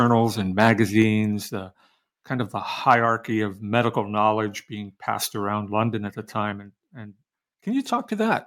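Microphone overload, likely from an input volume set too high, drives peaks past the converter's limit from 0.6 to 0.72 s by about 5 dB, and again from 2.9 to 2.94 s by about 2 dB. The flattened tops of a small share of samples give the loudest speech a harsh, crackling edge.

A microphone volume step-down follows at 3.06 s, likely the call software cutting the device's input gain after that clipped peak. Speech and background together drop by about 3 dB in a single abrupt step rather than a smooth fade.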